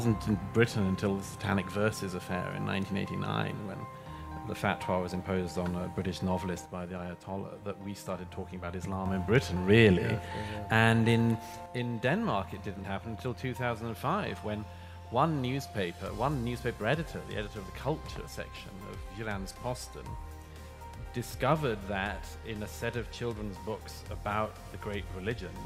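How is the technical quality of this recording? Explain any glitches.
The recording has a recurring level fault. From 6.66 to 9.06 s, and again from 11.66 s to the end, the sound abruptly drops about 6 dB, likely one channel dropping out before the mono sum.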